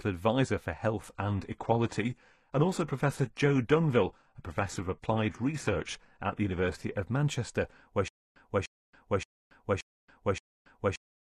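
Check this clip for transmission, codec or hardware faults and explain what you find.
Two faults are present.

Adaptive stream at a lower bitrate, 1.02 to 7.02 s: the stream switched abruptly, without a gap, to a lower-quality rendition. Nothing above 12.3 kHz remains and codec artefacts thicken, which fits a drop to a low-bitrate HE-AAC stream.

Stutter with silent gaps, 8.08 s to the end: a 0.30 s fragment replays five times, each followed by 0.28 s of digital silence, every 0.58 s. A player stall is the likely cause, and the missing audio is lost.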